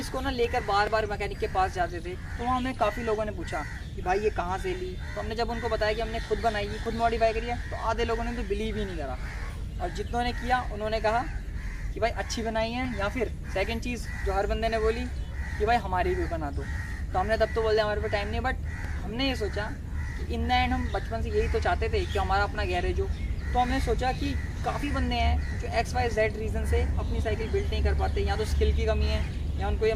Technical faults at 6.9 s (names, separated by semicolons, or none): overlap between stream segments